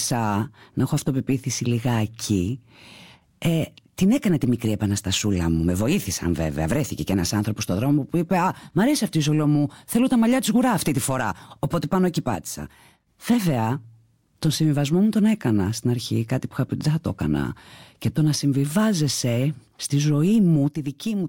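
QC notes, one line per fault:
12.35–13.07 s, one channel drops out: Just after "πάνω εκεί" the speech abruptly drops by about 6 dB, then returns at the same level. The likely cause is one stereo channel briefly going silent. Summed to mono, the shared sound loses half its level.
20.68 s to the end, one channel drops out: The same sudden drop of about 6 dB occurs and lasts until the clip ends, likely with the same cause.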